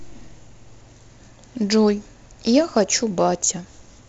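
From 0.26 to 3.54 s, faint clock slip clicks tick about every 0.7 s, likely one-sample slips between free-running clocks, showing as vertical spectrogram lines.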